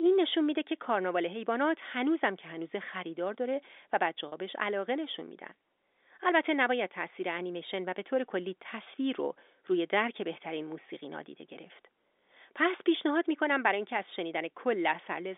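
Telephone-band speech over a G.711 line (roughly 250 Hz to 3.6 kHz), with two brief packet losses with pitch repetition at 4.28–4.32 s (40 ms, which fits two lost packets) and 8.84–8.86 s. Each gap is filled by repeating the last pitch cycle, giving a held, buzzy tone rather than the silent hole or click of a plain dropout.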